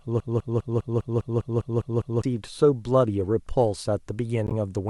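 It's a short speech recording, and it opens mid-stall. A broken-record loop is already under way when playback begins: the same 202 ms chunk repeats back to back about ten times until 2.24 s, most likely because the player or stream stalled and kept replaying its last fragment, so whatever speech belonged there is gone. Later, from 4.47 to 4.52 s, a corrupt frame gets decoded. Damaged bits in a few consecutive compressed frames put energy at the wrong frequencies, and you hear it as a brief glitch lasting about 60 ms.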